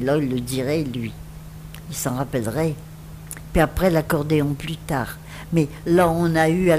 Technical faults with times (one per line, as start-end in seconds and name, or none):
0.08-6.58 periodic USB or driver dropouts